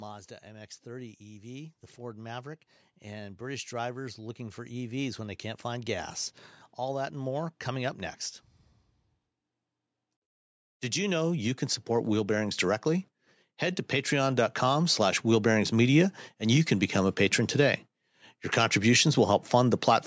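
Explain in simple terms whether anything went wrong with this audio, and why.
Something did go wrong, twice. From about 0.42 to 5.95 s, and again from about 10.93 to 15.74 s, you can hear automatic gain rising: the call's level control decided the input was too quiet and slowly turned itself up over several seconds. Because it's just boosting everything, the voice and the background noise swell together. The first climb is the bigger one, so that's where the swell is most obvious.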